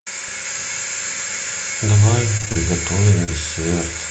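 From 2.37 to 2.57 s there is repeated packet loss, producing a robotic sound. Five separate gaps, the longest 26 ms, fall within that 0.2 s stretch. Each is patched by extending the previous sound, so about half the span is synthetic, and the speech turns choppy with pieces missing.

At 3.24 s a short concealed packet loss removes about 40 ms of audio. The receiver bridges the hole by continuing the preceding sound before blending back into the real signal. This is heard as a brief smear or wobble, and any short consonant there can be lost.

The tail of that same event, from 3.27 to 3.29 s, is a lost packet rebuilt from error correction. The single 20 ms frame is replaced by the low-bitrate copy carried in the following Opus packet, so there is no gap, but that moment sounds rougher and noisier. The call path itself is band-limited to 8 kHz.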